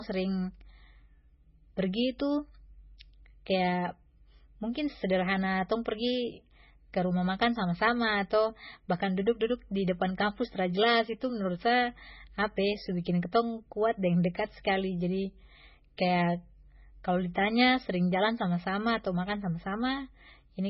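From the start to the end of the clip, the speech carries heavy MP3 compression damage. Nothing is present above 5.6 kHz, so the treble stops at a hard ceiling and sibilants lose their edge. The sound is watery and swirly, with chirpy, metallic residue on s sounds and smeared onsets. The likely cause is a very low bitrate, around 16 kbps, which leaves the encoder too few bits, so it drops weak frequency lines that then flicker in and out between frames.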